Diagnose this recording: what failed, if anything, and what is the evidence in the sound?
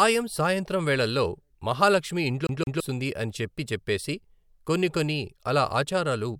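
A playback fault: the CD is stuck on one turn. Right after "సాయంత్రం వేళళ్ళో మహాలక్ష్మి", from 2.47 to 2.80 s, the same 168 ms slice of speech plays twice, with a tiny mute at each jump, before things carry on with "అని చెప్పి చెప్పేసి కొన్ని". That even, mechanical stutter is the giveaway. A scratch is kicking the laser back one track at the same spot on each revolution, so the disc replays that fragment until tracking recovers.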